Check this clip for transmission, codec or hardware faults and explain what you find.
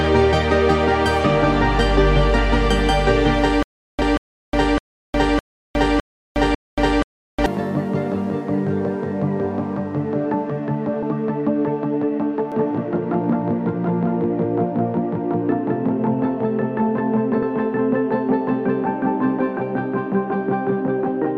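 Three kinds of fault are present: a stalling stutter, skipped compressed frames, and a doubled audio track.

From 3.63 to 7.46 s, a stutter with silent gaps: the stream likely stalled, replaying a 0.25 s fragment six times, each followed by 0.36 s of digital silence, every 0.61 s.

At 6.54, 11.02 and 17.42 s, compressed frames were skipped, so the audio jumps ahead. The jumps are roughly 200, 150 and 150 ms, consistent with 32 ms frames.

From 12.52 s to the end, a doubled audio track appears, probably from a second, slower capture path. A full-band copy at about equal level trails roughly 0.2 s behind, entering abruptly.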